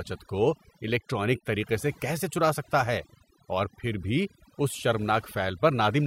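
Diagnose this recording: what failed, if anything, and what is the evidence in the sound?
Overdone noise removal runs through the whole speech recording, a failure at the call-processing stage where a noise suppressor was set far too aggressively. The evidence is a background pushed down and littered with twinkling specks. The suppressor is cutting individual frequency bands whenever their level sits close to its noise estimate, so the softer components of the speech are removed along with the noise.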